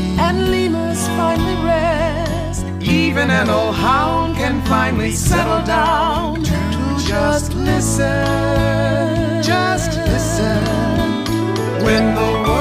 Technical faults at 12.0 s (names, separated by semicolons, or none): corrupt frame decoded